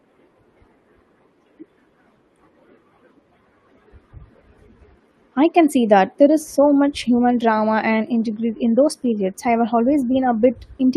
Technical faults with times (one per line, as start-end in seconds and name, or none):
none